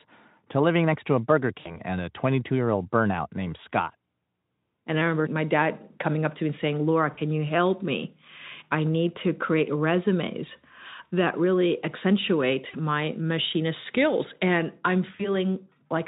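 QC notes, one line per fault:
1.59–1.79, 3.92–3.95, 7.13–7.19, 12.69–12.75 and 15.17–15.36 s, VoIP packet loss concealed by the speech codec: speech briefly smears into a buzzy, fading tone, then recovers weakly. Roughly 20–60 ms of lost audio is filled in by the Speex decoder extrapolating from its last pitch and filter.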